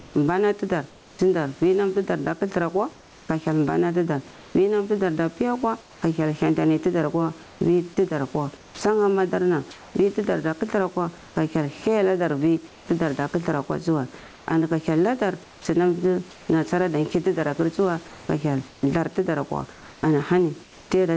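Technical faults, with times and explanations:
throughout, gain pumping: the level of the background keeps swelling in the pauses and sinking under each loud stretch of speech, a swing of roughly 15 dB, so loud and soft parts sit close together and sound squashed. The likely cause is gain set far too high, with a fast limiter pulling it back down.
0.0 to 1.19 s, 2.93 to 6.02 s, 7.43 to 11.36 s, 12.68 to 16.49 s and 18.08 to 20.90 s, comfort noise in place of the background: in parts of these pauses, about 0.44 s, 0.81 s, 0.84 s, 0.9 s and 0.93 s long, the real room background gives way to a flat, featureless hiss, the third coming after "hyel hantani tidar akwa" and the fourth ending before "nasara ada kir tidar". This likely comes from the sender stopping transmission during silence and the receiver filling in synthetic noise.
1.16 s and 8.76 s, onset clipped by the voice detector: the speech starts abruptly with no soft lead-in, losing its first 30 ms at 1.16 s before "wir nam ti dar" and its first 50 ms at 8.76 s. 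The likely cause is a voice detector slow to notice that speech had resumed, so those first moments were never sent and filler noise played instead.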